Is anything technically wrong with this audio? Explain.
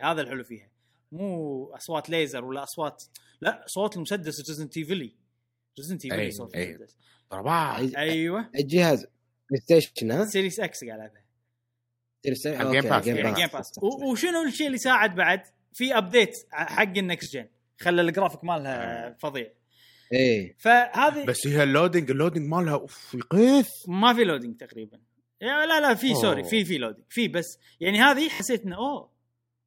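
Yes. There are two repeated buffers. New audio failed to reach the playback device in time, so it replayed the piece it already held. At 17.24 to 17.26 s a segment of about 20 ms plays twice, which fits a 20 ms buffer, giving a brief click in the speech. At 28.34 to 28.40 s the same short piece sounds four times in a row, with a hard join at each repeat, and is heard as a short buzzing stutter.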